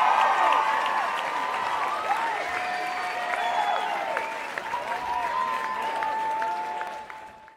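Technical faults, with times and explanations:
2.97, 4.74 and 6.87 s, dropped buffer (overrun): each is a jump ahead in the sound, losing roughly a tenth of a second without any silence. The likely cause is the hardware overwriting samples before the program collected them, joining both sides directly.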